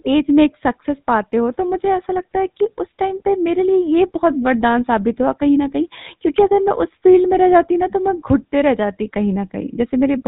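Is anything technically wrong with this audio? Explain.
Yes. Throughout the speech there is a buzzy, gravelly roughness with nothing above 4 kHz, the sound of the GSM full-rate codec, which rebuilds the voice from a vocal-tract model driven by sparse, regularly spaced pulses.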